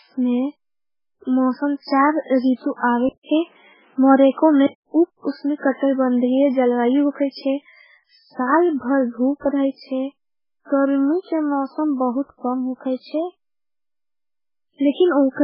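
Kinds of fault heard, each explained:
MP3 compression: Weak frequency content flickers on and off, giving a watery, swirly quality to the speech, and nothing sounds above 5.3 kHz. This is likely very low-bitrate MP3, fitting roughly 8 kbps. A spectrogram shows a hard ceiling and patchy, speckled gaps.
Input switched to a poorer device: After "मौसम चार रितु", a 200 ms gap opens at 3.09 s. The sound then narrows to nothing above 3.8 kHz until 4.87 s, before "उप उसने कटरी बन". The level shifts by around 5 dB, with new noise roughly 40 dB down. The likely cause is a change to a poorer input. A spectrogram shows a blank strip followed by a lowered ceiling.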